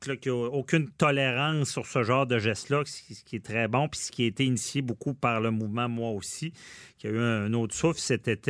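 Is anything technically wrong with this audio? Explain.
No, nothing technically wrong stood out on listening to this speech.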